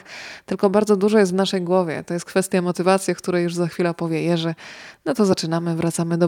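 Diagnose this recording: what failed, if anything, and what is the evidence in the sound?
Compressed frames skipped at 5.32 s, a codec-stage fault: roughly one frame, fitting a 24 ms frame length, never decoded, so the speech jumps ahead by about 20 ms.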